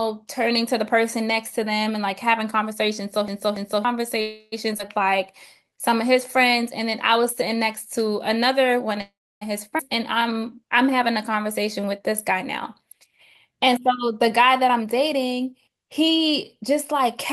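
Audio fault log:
3.28 to 3.85 s, CD stuck on one turn: A read fault throws playback back by the same distance each cycle, so a 285 ms piece of the speech plays twice more. Each jump brings a brief mute, giving an even, mechanical stutter.
4.21 to 4.54 s and 9.01 to 9.43 s, call audio freeze: Packets were likely held up in transit, leaving the jitter buffer empty. The receiver stretched the last sound into a fading buzz for 306 ms and then for 405 ms, the second ending in 290 ms of silence. Speech resumes where it stopped.
4.78 s and 9.77 to 9.81 s, skip ahead: Audio was dropped while later audio was already waiting, so playback leaps forward with almost no gap. Around 70 ms of speech is lost at the first jump and around 300 ms at the second, and the two sides are spliced almost directly together.
5.64 to 5.91 s and 9.99 to 13.53 s, jitter buffer slow-down: With the buffer running low, the receiver repeated single pitch periods to build a reserve. 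It added 36 ms and then 217 ms, so the speech plays at 90% and then 94% speed. The pitch stays the same while sounds drag out.
13.69 to 17.01 s, jitter buffer speed-up: The buffer held more audio than its target, so the receiver cut out short pitch-period pieces, about 200 ms in all. Speech runs at 106% speed with unchanged pitch and sounds hurried.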